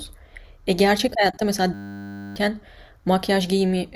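From 1.74 s to 2.36 s the speech stops and a steady buzz replaces it. This is a system hang loop. The driver or host stalled while the audio hardware kept replaying the same 10 ms stretch of its ring buffer, cycling it roughly sixty times. Because each loop is so short, the repeats merge into a tone at 100 Hz rather than a stutter, which points to a very small buffer. About 0.7 s of the original audio is lost.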